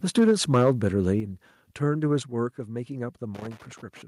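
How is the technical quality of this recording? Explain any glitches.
The recording has clear technical problems: distorted peaks early on, three abrupt level drops, and crackle at the end.

Microphone overload runs from 0.17 to 1.1 s. The speech peaks about 6 dB past the converter's limit, and a few percent of samples have their tops flattened. This is likely from the input gain being set too high for the converter. Loud syllables take on a harsh, crackling edge.

Microphone volume stepped down happens at 0.19 s, 1.2 s and 2.22 s, with drops of about 3, 7 and 5 dB. Each time, the speech and background fall together in one sudden step. This is likely the call software cutting the device's input volume after detecting excessive level or clipping.

Loose connector crackle runs from 3.35 to 4.02 s as an irregular burst of crackle and scratching. It points to a worn or dirty contact that keeps making and breaking as it moves, chopping the signal and adding pops from any DC on the line.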